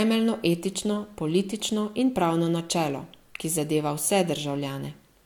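Nothing in this speech recording stands out as a technical fault; it just runs along without anything catching the ear.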